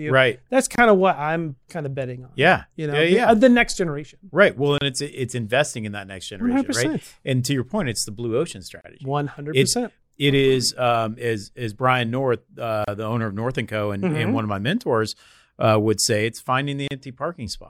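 Brief dropouts cut into the speech every 4 seconds, at 0.76 s (25 ms), 4.78 s just before "it's it's investing in", 8.81 s after "it's the blue ocean", 12.84 s, and 16.88 s after "would say it's" (32 ms each). Each is a gap at a join of encoded pieces: separately encoded segments were spliced without trimming each encoder's leading delay and padded final frame.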